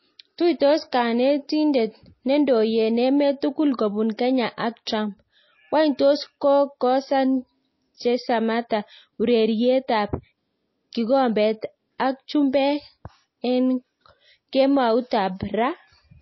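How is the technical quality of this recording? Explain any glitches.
The technical quality is poor, with plainly audible codec damage throughout and two brief smeared attacks.

MP3 compression, throughout: nothing is heard above 5.8 kHz, and the sound is watery and swirly. This fits a bitrate around 24 kbps, likely from MP3 encoding cutting treble and weak detail.

Pre-echo at 4.85 s and 8.69 s: quantisation noise spreads across each coding block, so a hiss of about 15 to 16 ms precedes the attacks and softens them.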